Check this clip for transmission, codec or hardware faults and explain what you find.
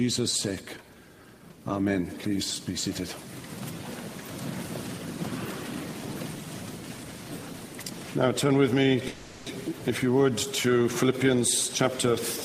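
There's one fault here: a call audio freeze from 9.07 to 9.49 s. Packets were likely held up in transit and the jitter buffer ran dry, so the last sound gets stretched into a fading buzz for about 390 ms, then resumes intact but 390 ms late.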